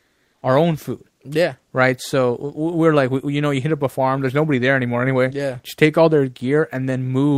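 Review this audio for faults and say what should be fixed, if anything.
The sender's voice detector likely judged the opening as silence and switched to discontinuous transmission, so the receiver generated comfort noise in place of the background from 0.00 to 0.41 s, just before "our own food". That first 414 ms is a steady, featureless hiss about 1 dB quieter than the real background, which sits about 48 dB below the loud parts. The behaviour fits Opus DTX. To prevent it, disable DTX or give the voice detector a longer hangover and pre-roll at stream start.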